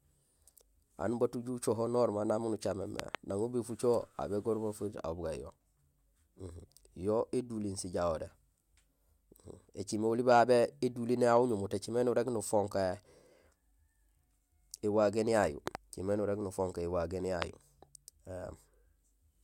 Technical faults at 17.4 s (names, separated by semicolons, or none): loud pop